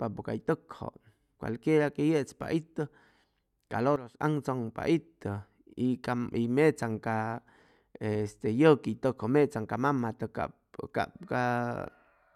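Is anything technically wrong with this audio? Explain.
Yes. A sudden gain jump runs from 3.96 to 4.21 s: the level drops by about 12 dB in a single step, likely from a gain setting applied without a ramp. The speech and its background noise fall together, then return abruptly.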